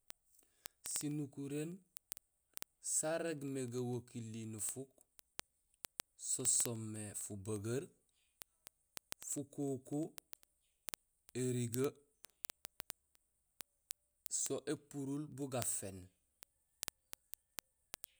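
Word clock ticks run through the speech from 0.10 s to 18.19 s. The receiving device is clocked independently of the digital link feeding it, and the two clocks disagree by roughly 400 parts per million. Each time they drift a full sample apart, one sample is dropped or repeated. This happens about every 50 ms, giving hundreds of ticks over the clip at a steady rate of around twenty per second.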